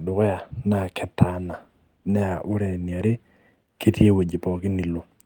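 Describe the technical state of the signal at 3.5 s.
At 3.5 s you're right in the middle of a run of repeated timing corrections that goes from 0.58 s to 4.94 s. The receiver keeps patching in short repeated slivers of audio, pulling the effective speed down to 97% and adding somewhere around 150 ms over that stretch. Each patch is tiny, so what you hear is a faint hiccup here and there and a slightly uneven, dragging tempo in the speech.

Behind that is clock drift between sender and receiver, and it runs through the whole clip. The sender's clock is running roughly 3% slow compared with the receiver's, so the jitter buffer keeps draining faster than it gets refilled. The receiver has to fill those gaps by repeating bits of audio, which is why the corrections at 3.5 s all push the same way, stretching the sound rather than cutting it.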